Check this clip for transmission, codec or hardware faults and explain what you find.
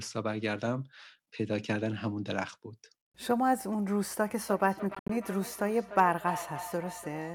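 Two faults are audible, both in the second half of the clip.

From 4.47 s to the end of the clip there is feedback echo between two devices. The speech returns at a fixed spacing of roughly 0.3 s, peaking at about 11 dB below the direct speech. This happens when two devices on the same call share a room. One plays back what the other's microphone captured, and that microphone picks the playback up again. Each echo canceller removes only its own device's output, so the loop is never cancelled.

Between 4.95 s and 5.10 s the audio breaks into short silent holes, about 100 ms of sound missing in total across a 145 ms stretch. The longest single gap is about 73 ms. After each gap the sound picks up further along, as though it had kept playing underneath. The likely cause is a Bluetooth dropout: audio packets reached the headphones too late to be used and were discarded, leaving silence until valid packets arrived again.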